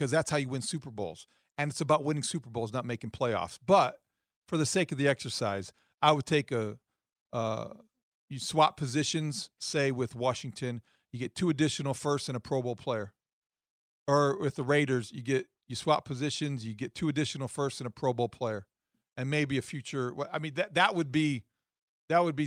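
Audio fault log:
No faults detected.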